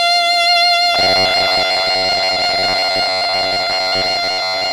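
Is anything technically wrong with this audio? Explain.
Yes. From about 0.95 s to the end, the music takes on robotic sound from repeated short buffers: a rigid, metallic buzz fixed near 93.8 Hz. The likely cause is new audio arriving too seldom, so playback keeps looping a slice of about 10.7 ms while most of the real signal is skipped. Unlike a plain stutter or dropout, there are no audible gaps. The loop rate itself imposes one steady pitch, while the music only loosely shows through.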